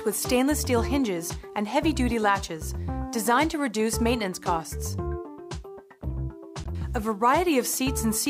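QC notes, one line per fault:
6.61 to 6.66 s, damaged data in a compressed stream: corrupted bytes threw the decoder out of sync, giving a brief chirp, squawk, click or short hole before it relocked on the next frame.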